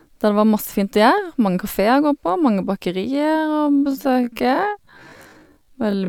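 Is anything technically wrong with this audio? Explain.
Yes. From 3.09 s to the end, the speech is a time-stretched section, slowed to about 0.55× with pitch unchanged, likely by repeating short segments, so it drags.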